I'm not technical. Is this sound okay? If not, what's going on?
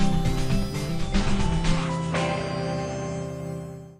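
No. From 0.85 to 3.51 s, digital radio blending to analogue occurs: the receiver lost its digital signal and faded over to FM, adding low hiss.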